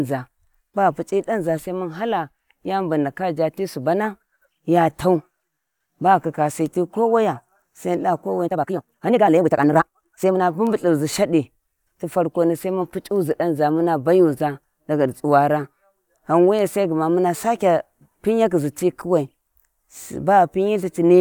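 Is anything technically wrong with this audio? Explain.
Yes. From 8.42 to 10.42 s there is a time-stretched section: the speech suddenly runs at about 1.97 times its normal pace while the pitch stays the same, so it sounds rushed. The likely cause is software squeezing that stretch to fit a shorter length by dropping short pieces. On a spectrogram, the harmonic spacing stays unchanged while syllables crowd closer together, and the waveform shows compressed envelopes with small splice discontinuities.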